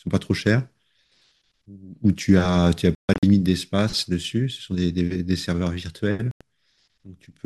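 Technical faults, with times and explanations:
2.95–3.23 s and 6.31–6.41 s, Bluetooth dropout: the speech breaks into silent holes. The first loses about 209 ms across 279 ms, with the longest gap 139 ms. The second loses about 93 ms. Each time the speech picks up further along rather than where it stopped, likely because wireless audio packets arrived too late and were dropped.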